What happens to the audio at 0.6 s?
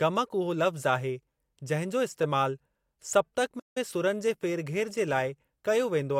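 Nothing goes wrong at 0.6 s; the speech carries straight through that moment with no dropout, glitch or distortion.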